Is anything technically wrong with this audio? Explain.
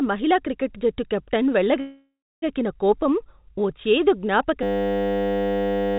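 Yes, there are two faults in this speech.

From 1.8 to 2.44 s, after "మహిళా క్రికెట్ జట్టు కెప్టెన్", a call audio freeze, likely from delayed packets emptying the jitter buffer: the last sound fades into about 0.3 s of silence, then resumes at "కోపం ఓ చేదు" with nothing lost.

From 4.63 s to the end, after "కోపం ఓ చేదు", a system hang loop: the system froze while the hardware replayed one 10 ms buffer 136 times, producing a steady 100 Hz buzz that replaces roughly a second and a half of audio.

The telephone-band codec leaves nothing above 4 kHz.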